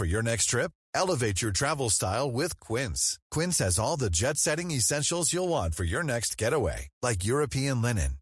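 No technical faults are audible.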